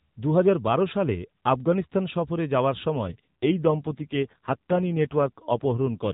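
From 2.96 s to the end, right after "সালে আফগানিস্তান সফরে যাওয়ার", the speech turns rougher, buzzier and more synthetic, with no gap and no change in bandwidth. This is an AMR rate drop. The narrowband mobile codec, which until then carries the speech with only light roughness, falls to a lower mode, which fits a step from 12.2 to 5.9 kbps. Fewer bits go to modelling the speech as the link gives more to error protection.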